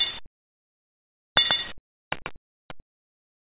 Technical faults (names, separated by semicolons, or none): doubled audio track; sound dropped by the voice detector